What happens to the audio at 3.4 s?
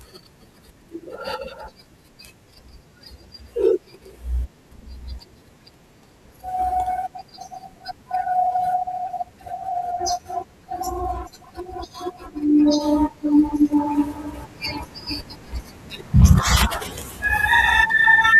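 Nothing goes wrong at 3.4 s; the speech carries on cleanly through that moment with no dropout, click, distortion or other fault.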